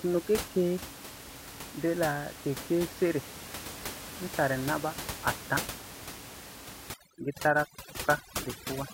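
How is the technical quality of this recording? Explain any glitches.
The recording has one glitch, overdone noise removal, in its final two seconds. Before that, room noise sits about 12 dB below the speech.

From 6.94 s to 8.94 s, aggressive noise reduction mutes bands near its noise estimate, leaving twinkling specks.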